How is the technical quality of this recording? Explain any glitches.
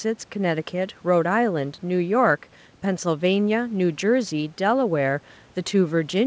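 No faults or glitches occur.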